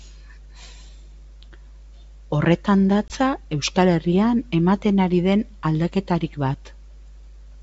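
At 3.08 to 3.12 s, packet loss on an ADPCM call leaves a hard-edged 20 ms silent hole, about one packet, before the decoder's predictor resynchronises with the sender.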